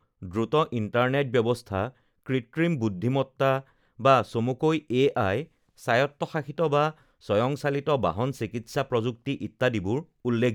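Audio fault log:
No faults can be heard anywhere in this speech recording. There is nothing to log.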